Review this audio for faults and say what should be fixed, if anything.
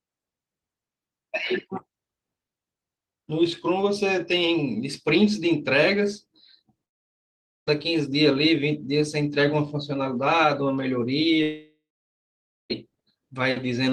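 Long network dropout at 6.85–7.69 s and 11.43–12.72 s: the speech stops, the last sound trails off as a fading buzz into silence, and it resumes with about 0.82 s and 1.28 s missing, likely from stalled packet delivery. Prevent this with a more stable connection, larger jitter buffering, or forward error correction.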